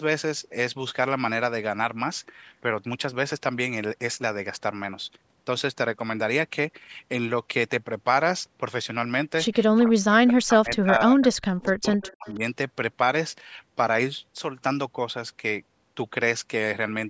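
From 9.67 to 11.21 s, speech suppressed in double talk: the voice drops by about 40 dB in pieces. The echo canceller likely muted it while both sides spoke. At 9.76 s, echo leak adds a faint copy, 230 ms late. At 11.22 s a louder echo scrap follows, 266 ms late. From 11.41 to 12.41 s suppression returns. Faint echoes at 11.62 s and 12.03 to 12.35 s sound 266 ms behind.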